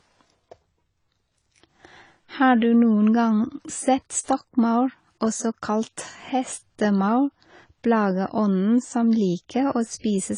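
Low-bitrate audio saved at a high bitrate runs throughout this speech clip: nothing sounds above 10 kHz, likely an earlier low-bitrate encode whose cut-off and artefacts a later, larger encode cannot restore.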